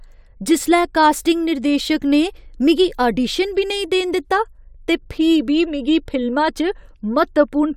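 A speech recording with no technical faults to be heard anywhere in the signal.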